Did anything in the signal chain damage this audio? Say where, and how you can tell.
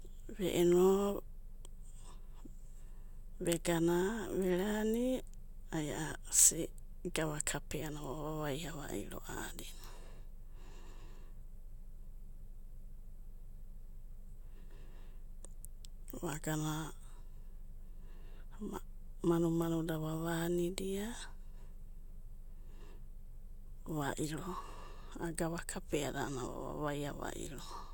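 No, nothing audible in this speech points to damage at any stage of the chain.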